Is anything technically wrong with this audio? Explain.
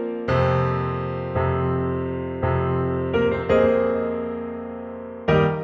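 No, no technical faults.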